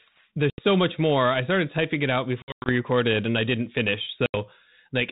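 Packet loss on an ADPCM call at 0.5, 2.42 and 4.26 s leaves hard-edged silent gaps of about 80 ms, 180 ms spread over 240 ms, and 80 ms. The decoder's predictor and step size lose sync with the sender's, so the speech returns slightly distorted.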